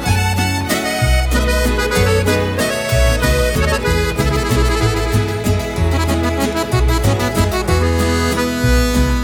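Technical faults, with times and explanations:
Nothing here stands out as a technical fault; the audio just runs along without any trouble worth pointing to.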